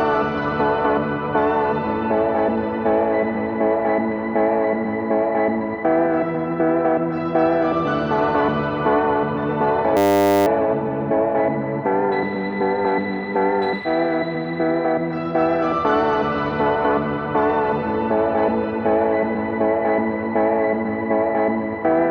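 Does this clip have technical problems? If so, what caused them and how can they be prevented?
Yes. A system hang loop runs from 9.97 to 10.46 s. The system froze while the sound hardware kept replaying one 10 ms buffer, so about half a second of audio became a steady 100 Hz buzz. Prevention: update the audio driver and have output mute when the buffer stops refreshing.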